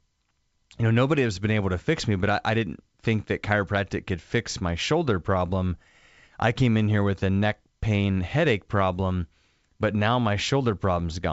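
Nothing stood out on listening to this speech, which comes across as ordinary G.722 wideband telephone audio at 64 kbit/s.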